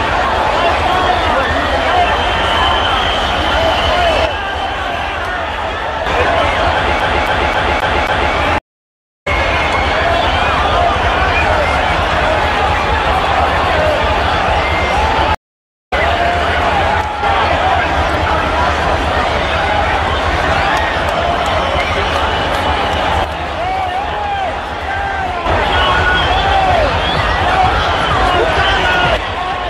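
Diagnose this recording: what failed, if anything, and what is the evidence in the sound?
The level drops abruptly by about 6 dB at 4.26–6.06 s, 17.01–17.23 s, 23.24–25.46 s and from 29.17 s to the end. Material shared by both sides persists at reduced level, consistent with one channel dropping out before a mono sum, likely an intermittent analogue wiring or connector fault.

From 7.00 to 8.34 s, a 268 ms segment repeats five times with a brief mute at each jump. This is the even stutter of a CD stuck on one turn: a scratch returns the laser to the same track position every revolution during playback.

At 8.58 s the audio goes silent for 624 ms and at 15.35 s for 518 ms. Each time it resumes roughly 0.4 s further on. These are network stream reconnects, where the player re-established the connection and restarted its decoder mid-stream, skipping material.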